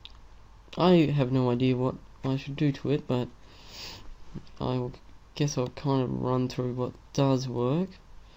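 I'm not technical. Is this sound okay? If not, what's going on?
No. There is an electrical switching spike at about 6.54 seconds: a very short, sharp snap sitting on top of the sound, lasting only a few thousandths of a second. It is likely caused by a nearby switch, motor or static discharge letting off a tiny arc of electricity, which the audio cable or equipment picked up as if it were part of the sound.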